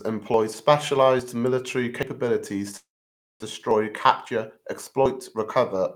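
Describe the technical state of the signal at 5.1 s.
At 5.06 s there is a small jump ahead in the speech. About 20 ms is missing. This is likely a dropped buffer (overrun), overwritten before it was read.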